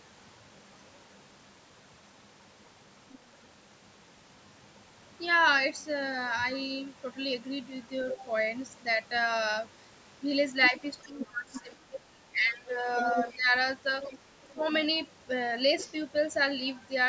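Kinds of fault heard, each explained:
Other side's voice leaking through: at 3.12, 8.1, 10.63 to 11.61, 12.98 and 14.03 to 14.81 s, a second voice bleeds in, likely loudspeaker echo the canceller missed, sometimes nearly as loud as the talker.
Speech suppressed in double talk: from 10.7 to 13.54 s and at 14.49 s, the talker's voice dips by up to around 20 dB, likely because the echo canceller turned down both sides together.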